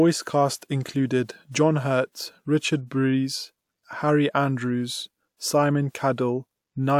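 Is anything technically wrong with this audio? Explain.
No, nothing technically wrong turns up anywhere in this speech recording.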